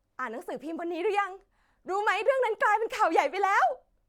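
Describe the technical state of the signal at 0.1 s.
At 0.1 s the speech signal is intact, with no technical fault audible at that moment.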